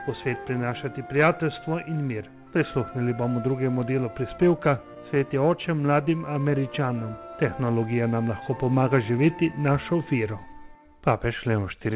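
Brief ticks and small smears crop up between 4.58 and 5.21 s, a handful of them, each up to around 15 ms, leaving the audio clear but hiccupy across that stretch. These are scattered short gaps. Individual packets went missing or arrived late, and the receiver covered each tiny hole by extending the sound that came just before it, which is what produces the momentary smear. Then from 6.04 to 6.94 s the audio drags, playing at about 94% speed while keeping its pitch, so sounds stretch out, adding 62 ms overall. This is a jitter buffer slow-down. With its reserve running low, the receiver repeated short pitch periods and slivers of pauses back to back to build up margin. Everything sits inside a band that stops at 4 kHz, which fits a narrowband G.711 call path.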